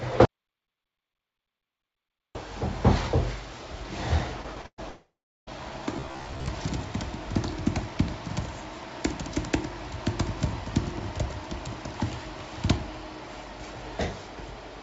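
At 0.25 s the sound cuts off abruptly into an audio dropout to silence that lasts until 2.35 s, roughly 2.1 s in all. The gap is silent, with no room tone or hiss beneath it, and the audio returns mid-flow as though nothing had paused. The likely cause is the input being lost, through a disconnected device, a failed link or a mute, while the recorder kept writing silence. Whatever occurred during those two seconds is gone.

From 4.42 to 4.80 s the sound breaks up with repeated packet loss, giving a choppy texture. Four separate holes open in quick succession, the longest about 118 ms. Each one is patched by stretching the preceding sound, so about 180 ms of real audio is replaced with synthesized continuation, close to half of that stretch. Fragments are missing.

Almost immediately afterwards, from 4.90 to 5.49 s, comes a long network dropout. The receiver first carries the last sound forward as a fading buzz, then drops to silence for roughly 360 ms before the audio resumes. 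Nearly 0.6 s of the original is never heard, and the sound picks up further along rather than where it left off. This points to a likely interruption in the network stream.

Between 5.97 and 6.51 s the sound turns into a rigid metallic drone from robotic sound from repeated short buffers. A fixed buzz at about 67 Hz sits over it, which matches a segment of roughly 15 ms being replayed over and over, likely because fresh audio arrived too rarely and the last buffer was looped to fill the time. About two-fifths of this section is repeated material, so the original movement is followed only loosely. Throughout the clip the audio carries nothing above 7 kHz, which fits a wideband call codec such as G.722.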